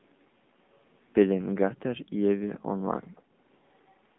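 Throughout, the speech carries AMR narrowband mobile codec damage: a buzzy, synthetic sound, with the spectrogram cut flat near 3.8 kHz, consistent with a low AMR-NB mode around 7.4 kbps. From 3.15 to 3.22 s, a very faint copy trails the speech by 157 ms, likely an echo leak, showing as a weak repeated smear on the spectrogram.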